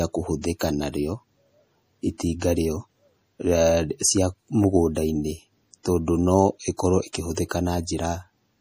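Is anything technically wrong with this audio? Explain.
Yes. Two faults are audible.

Throughout the speech, there is plainly audible codec damage, likely from MP3 compression. Nothing is heard above 15.4 kHz, a fixed treble cut. Weak frequency content flickers in and out from frame to frame. That gives a watery, swirly texture, with metallic chirps on s sounds and smeared onsets. The depth of the damage fits a low bitrate, around 40 kbps. At that rate the encoder runs short of bits and discards detail.

At 7.13 s there is pre-echo. A sharp attack falls late in a transform block. The quantisation noise, sized for the loud attack, spreads across the whole block, including the quiet moment before it. So a short hiss leads the attack by about 18 ms. The attack itself sounds softened and smeared rather than crisp.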